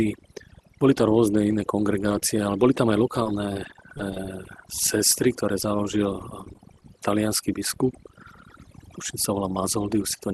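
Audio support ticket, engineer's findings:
Overdone noise removal, whole clip. Background pulled down and broken up into twinkling specks. Suppressor set too aggressive.

Same fault, mechanism. Individual frequency bands cut hard when they sit near the noise estimate. Quiet speech detail falls under that threshold and goes with the noise.

Lost packet rebuilt from error correction, 0.99 s, 1.01 s, 1.06 s. Three brief rough, noisier patches, no gap. Probable component: Opus decoder playing low-bitrate in-band FEC copies carried in the following packets.

Same events, detail. Each rebuilt stretch about 10 ms. Sound is coarser there, not dropped. The top end through the call path stops near 12 kHz, which fits Opus at around 32 kbps, and the copies are rougher than that.

Scattered short gaps, 1.50 to 4.88 s. About five brief ticks and smears, longest roughly 15 ms. Probable component: jitter buffer and packet loss concealment extending the last sound over lost or late packets.

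Scattered short gaps, 5.62 to 6.95 s, ending just before "talianský biskup". About five small hiccups, longest roughly 10 ms. Same mechanism: concealment continues the previous audio across each missing packet.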